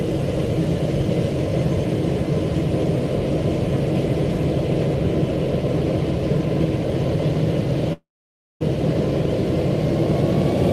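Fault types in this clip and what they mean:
Long network dropout: at 7.93 s the sound blurs into a fading buzz, then goes silent, likely from lost packets; 0.68 s never comes back.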